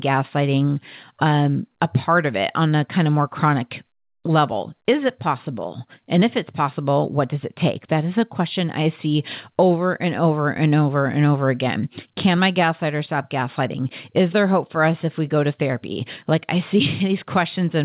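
No faults are audible in this speech; it comes through a narrowband call path with nothing above 4 kHz, as expected for a G.711 A-law link.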